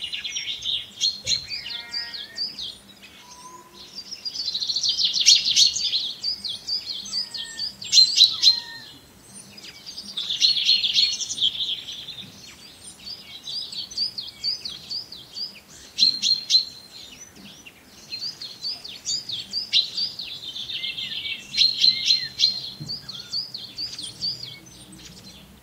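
At 3.96 to 3.98 s there are lost LE Audio frames. About 15 ms of the Bluetooth stream never arrived, which fits two 7.5 ms frames. The LC3 decoder filled the gap by reusing the last spectrum with random signs. Any tone there smears briefly into noise. A longer loss follows at 11.44 to 11.49 s. It covers 37.5 ms, about five frames. The concealment fades as it runs, so the sound thins and blurs before it returns.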